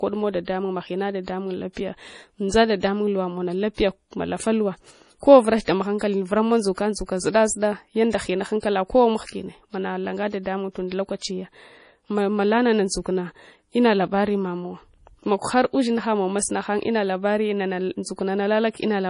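Speech throughout its length carries likely MP3 compression: treble stops dead at 10.5 kHz, and unlike a plain low-pass, weak detail swirls and chirps on s sounds, fitting a heavily starved bitrate near 32 kbps.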